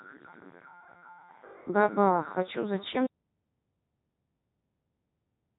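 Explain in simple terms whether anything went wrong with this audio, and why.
The speech sounds robotic and buzzy throughout, with a hollow, synthetic edge and nothing in the high frequencies above about 3.8 kHz, so it lacks crispness. This is the Codec 2 vocoder at work. Instead of keeping the actual sound wave, this digital-radio codec sends only a rough description of the voice: its pitch, loudness and overall tone. The receiving end rebuilds the voice from simple tones, which is why it comes out heavily mechanical here.

At 3.06 s the sound cuts out completely and stays silent to the very end. It is total silence with no background hiss or room sound, like a switch being flipped. This is an audio dropout to silence. The likely cause is that the input was lost, perhaps through a disconnected device, a failed link or an accidental mute, while the recording kept running and filled the rest with nothing. 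Whatever came after that point is gone.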